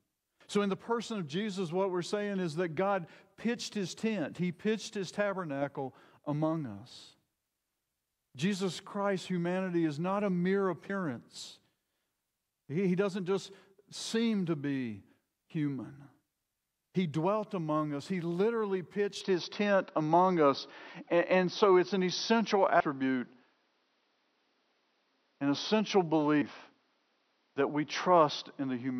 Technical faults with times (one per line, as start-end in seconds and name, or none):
10.89 compressed frames skipped
19.21-29.00 input switched to a poorer device
22.80 compressed frames skipped
26.41 compressed frames skipped